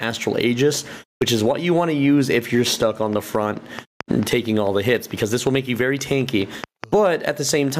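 Gain pumping runs through the whole clip, likely from input gain set far too high for the microphone, with a fast limiter clamping down on every loud moment. The gain swings by about 20 dB, leaving the audio squashed and its loud and soft parts crowded together in level.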